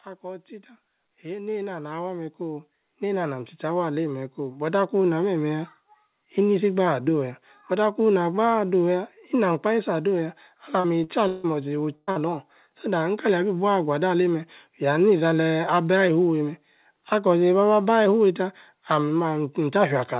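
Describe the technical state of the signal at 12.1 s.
At 12.1 s the signal sits at the tail of a burst of packet loss running from 11.95 to 12.10 s. About 120 ms of audio never arrived, and the receiver filled the whole span by extending the last received sound and fading it down, with no outright silence. The result is a held, decaying buzz or hiss in place of real content. When playback resumes, it picks up later in the audio, and those 120 ms are simply gone.

Immediately afterwards, from 12.11 to 12.19 s, there is a short concealed packet loss. About 40 ms was missing and was covered by roughly 42 ms of synthesized continuation, built from the preceding pitch or shaped noise and then crossfaded back into the decoded stream. It is heard as a brief smear or wobble right after the longer dropout, within the narrowband telephone sound of the G.711 A-law path, which carries nothing above 4 kHz.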